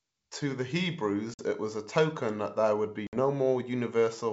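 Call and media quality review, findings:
Packet loss on ADPCM call, 1.34–1.44 s and 3.07–3.15 s: hard-edged silent gaps, about 50 and 60 ms of audio lost. The first comes just before "was a token that", the second just after "that there would be". Decoder predictor and step size desync, so the audio resumes slightly distorted. The waveform shows flat holes with step edges, and the spectrogram shows full-band blank slots.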